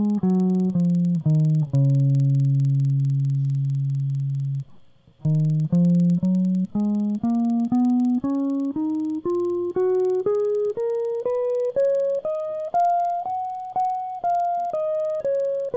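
Music with the resampler restarted on every block for the whole clip, likely during a 44.1 kHz to 16 kHz conversion: each 50 ms block gets edge errors, heard as a steady 20 Hz ticking buzz under the music and seen as evenly spaced vertical lines on a spectrogram.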